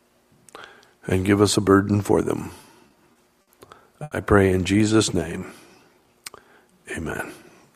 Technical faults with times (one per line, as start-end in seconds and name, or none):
2.61-3.49 repeated stalls (stutter)
4.03-4.13 short stall from a late packet
4.84-5.40 jitter buffer slow-down
5.84-6.08 jitter buffer slow-down